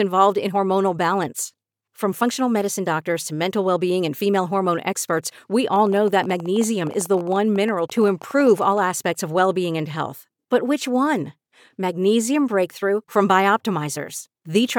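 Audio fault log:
5.76–8.79 s, train of clicks after "female hormone experts we": about forty same-shaped ticks, unevenly spaced near 14 per second and peaking near speech level, likely from interference.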